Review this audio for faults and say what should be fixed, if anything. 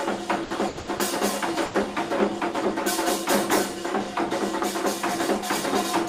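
From 0.43 to 1.01 s the sound drags and stutters. It catches four times, with the longest hold about 90 ms, and the held portions add up to 260 ms, close to half of that stretch. These are repeated stalls (stutter). Packets arrived later or more slowly than playback needed, so the jitter buffer kept running dry and the receiver extended the last sound each time. Nothing is actually lost. Prevent it with a deeper or adaptive jitter buffer that grows when arrival rate lags.

Between 1.65 and 1.76 s a single sound is held about 90 ms too long before the audio resumes where it left off, with no content lost. This is a short stall from a late packet. The network delay jumped by roughly 90 ms, so the due packet was missing, the jitter buffer emptied, and the receiver stretched the last sound until the packet arrived. Prevent it with enough jitter-buffer headroom to absorb sudden delay jumps of that size.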